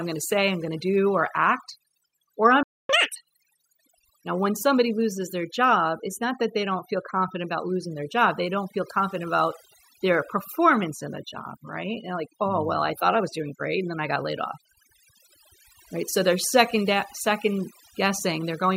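Overdone noise removal runs through the whole speech clip. The reducer pulls bands near its noise estimate far down or out, taking quiet parts of the voice with them. The background drops and breaks up into twinkling specks. A spectrogram shows dark holes between scattered isolated bright dots.

A playback stall follows from 2.63 to 2.89 s. The sound stops mid-flow for about 260 ms, then resumes, likely because the player ran out of buffered data. The waveform drops to a flat line, and the spectrogram shows a blank vertical strip across all frequencies.

Catch-up at higher speed runs from 2.89 to 3.16 s. The player races through its backlog at double speed by resampling, so the pitch leaps up by roughly ten semitones into a chipmunk-like squeak. On a spectrogram the harmonics jump upward and spread apart, and the waveform cycles look squeezed in time.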